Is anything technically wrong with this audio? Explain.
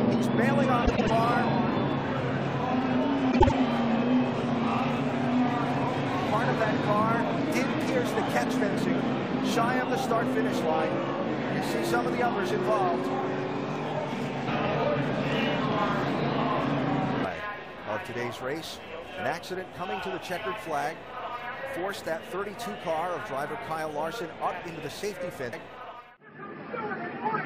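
Yes, there are two instances of frames out of order, at 0.86 to 1.10 s and at 3.31 to 3.52 s. In each, two neighbouring runs of encoded frames were decoded in swapped order, so the short stretch plays back with its halves exchanged. The swapped blocks are about 105 ms and 78 ms long, which fits runs of four and three codec frames. The result is a brief garbled flutter. Unlike a dropout or a skip, nothing is missing and timing afterwards stays intact.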